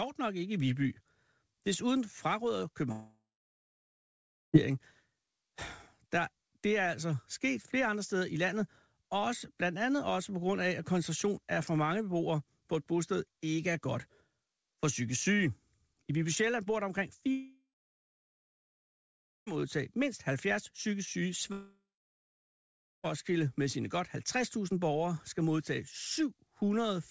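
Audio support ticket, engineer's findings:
Long network dropouts at 2.92–4.55 s, 17.31–19.61 s and 21.52–23.05 s: last sound stretched into fading buzz, then 1.2–1.8 s silence, resuming beyond the gap with audio lost, not a short glitch. Likely receiver concealment over G.722 (nothing above 8 kHz).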